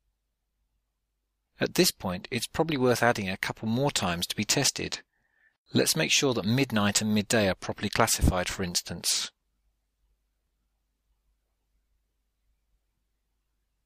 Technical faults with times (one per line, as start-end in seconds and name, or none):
none